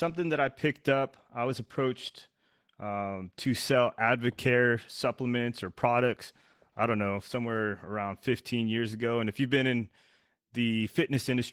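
From start to finish the speech carries Opus voice compression, with plainly audible damage that fits a bitrate around 16 kbps in hybrid mode. The linear-prediction coder handles the band below 8 kHz with a coarsely quantised excitation, so the voice sounds hoarse and slightly robotic. A thin transform layer fills the top of the band. On a spectrogram, harmonics look smeared and the region above 8 kHz shows patchy, blocky energy that changes in steps, consistent with 20 ms frames.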